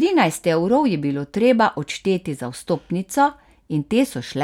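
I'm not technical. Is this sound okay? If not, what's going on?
Yes, it's fine: nothing in this recording jumps out as a problem, so you can listen without worrying about it.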